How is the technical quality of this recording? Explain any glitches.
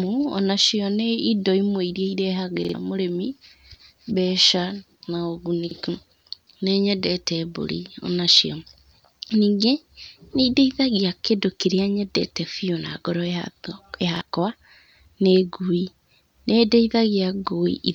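The recording has three stutters caused by a repeated buffer. At 2.65 s, 5.71 s and 14.16 s, fresh audio reached the playback device too late, so it replayed its last chunk, about 46 ms, which fits a 2048-sample buffer. The speech jumps back on itself with a hard seam at each repeat. It plays twice more at 2.65 s, costing about a tenth of a second, and once more at the other two points, costing about 50 ms each.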